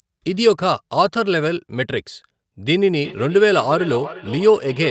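From 3.04 s to the end, feedback echo between two devices returns the speech roughly every 0.4 s, about 15 dB down. A spectrogram shows evenly spaced, fainter copies.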